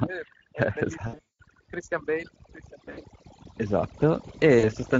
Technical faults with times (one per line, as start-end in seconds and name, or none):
0.00-5.00 overdone noise removal
0.00-5.00 Speex codec
1.07-1.40 VoIP packet loss concealed by the speech codec
2.77-3.00 VoIP packet loss concealed by the speech codec
4.59-4.67 VoIP packet loss concealed by the speech codec